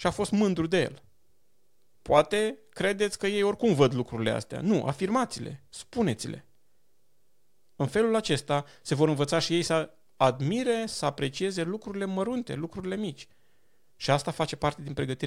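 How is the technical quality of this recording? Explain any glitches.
The technical quality of this recording holds up, with no glitches to explain.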